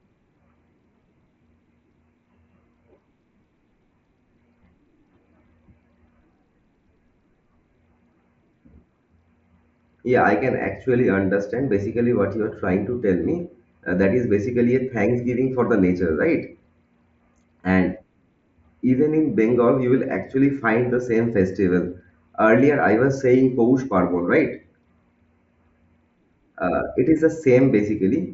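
Nothing goes wrong anywhere in this speech, which comes over a Bluetooth mSBC headset link and so tops out around 7.7 kHz, just as that wideband path is meant to.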